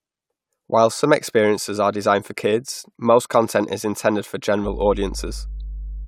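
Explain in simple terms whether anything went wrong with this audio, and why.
Something did go wrong near the end. From about 4.63 s through to the finish at 6.08 s, a steady low buzz joins the speech: mains hum. The power line leaked into the signal, likely through a ground loop or nearby transformer, putting a 50 Hz tone in fairly loud.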